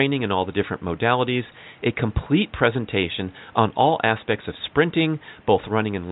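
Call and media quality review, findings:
No system faults found in the speech signal; the only background is the room's own ambient noise, sitting about 31 dB below the speech level.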